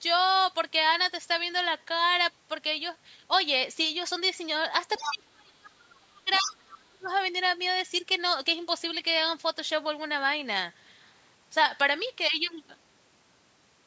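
From 4.94 to 5.14 s a second voice sits under the talker, only a few dB below the main speech. This is the other side's voice leaking through, likely loudspeaker echo that the echo canceller failed to remove. On a spectrogram it shows as a separate set of harmonics overlapping the talker's.

From 5.01 to 7.1 s the talker's level drops while the far end speaks. This is speech suppressed in double talk: with both sides active, the canceller likely could not tell its own talker from the echo and turned everything down. The deepest drop is roughly 35 dB. The waveform envelope shows deep notches across those two seconds. Inside this stretch, from 6.45 to 6.61 s, the far-end voice breaks through again, about 10 dB under the talker, as another short band of harmonics. Throughout the clip the spectrogram is empty above 8 kHz.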